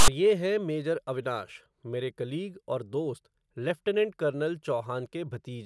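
From 0 to 0.08 s, before "ये हैं मेजर अविनाश", there is a loud, hard-edged burst of rasping static: file tags played as audio. A block of text metadata at the head of the file was decoded as samples, so character bytes became a buzzy, lopsided waveform pushed to one side of zero. A single click or a codec glitch would be brief or tonal. This is a rasp with abrupt start and stop, and the speech follows it.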